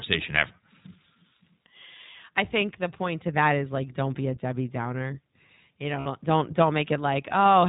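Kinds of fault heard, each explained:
iLBC codec: The speech is band-limited, with nothing above 4 kHz, and has a plainly audible rough, slightly synthetic edge. This comes from narrowband VoIP coding, here at 15.2 kbps with 20 ms frames, where each frame's excitation is coded on its own without drawing on the one before.
Lost iLBC frames: From 6.00 to 6.07 s the speech turns briefly into a held, faintly buzzy tone before snapping back. About 60 ms of packets went missing, and the decoder covered the gap by repeating the last pitch cycle mixed with noise.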